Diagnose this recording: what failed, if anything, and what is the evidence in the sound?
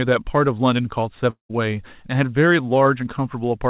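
At the network stage, speech breaks off at 1.3 s. A fading buzz continues the last sound, then about 120 ms of near silence follows, and speech resumes at 1.51 s with about 200 ms lost. A long network dropout is the likely cause. A brief packet loss would be covered smoothly, whereas here the concealment runs out and goes quiet. The G.711 call band, with nothing above 4 kHz, carries on either side of the gap.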